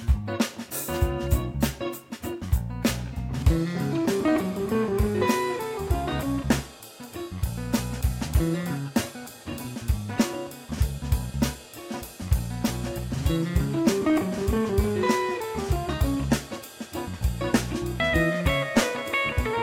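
No technical faults can be heard anywhere in this recording.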